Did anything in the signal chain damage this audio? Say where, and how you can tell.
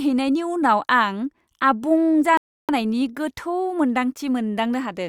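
Yes. At 2.37 s the speech drops abruptly into silence and stays there until 2.69 s, then carries on from exactly the point where it broke off, with nothing skipped. That is a rebuffering stall at the playback stage, fed by network delivery: the player used up its downloaded audio, paused until more arrived, and then resumed. No audio is lost, but the gap adds about 314 ms to the timeline.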